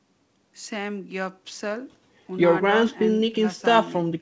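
No technical faults can be heard in this speech clip. It has passed through a WebRTC call path working as intended, where the G.722 codec leaves nothing above 8 kHz, which fits a 64 kbps wideband setting.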